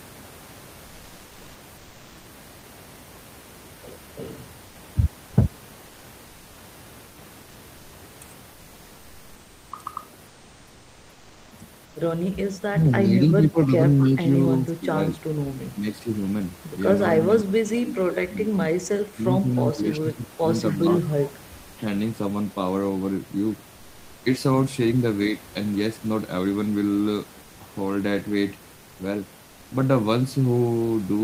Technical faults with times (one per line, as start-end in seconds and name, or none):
1.79-2.23 comfort noise in place of the background
7.07-7.15 comfort noise in place of the background
10.27-11.51 comfort noise in place of the background
11.87-11.95 comfort noise in place of the background
12.69-13.79 speech suppressed in double talk
14.10-15.19 speech suppressed in double talk
15.58-16.09 speech suppressed in double talk
17.24-18.61 speech suppressed in double talk
19.14-21.35 speech suppressed in double talk
20.71-20.77 echo leak
27.43-27.59 comfort noise in place of the background
29.43-29.71 comfort noise in place of the background